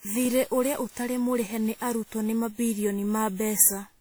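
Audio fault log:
Throughout, generation loss: the speech sounds swirly, smeared and hollow beyond what its full bandwidth up to 20.1 kHz suggests, with blurred attacks, likely from around ten successive lossy re-encodes, consistent with WMA near 96 kbit/s, each pass stacking fresh quantisation noise and spectral holes.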